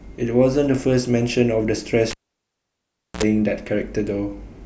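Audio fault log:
2.11–3.23 s, cable pulled and plugged in: pop, 1.07 s near-silence, 62 ms of 60 Hz buzz, then pop, as a live lead is unplugged and reinserted.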